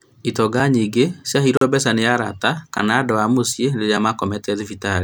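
A short hole interrupts the speech from 1.57 to 1.61 s, and a single sharp tick follows at 2.78 s. Both are blocks of digital silence, 40 ms and 10 ms long. The sound cuts out abruptly and returns without any fade.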